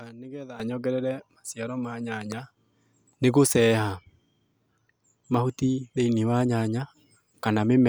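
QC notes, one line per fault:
0.60 s to end, sudden gain jump: level steps up by about 13 dB between adjacent samples and stays there, likely an unramped digital gain change; the background noise rises with the speech, which separates it from a louder talker or a gradual fade.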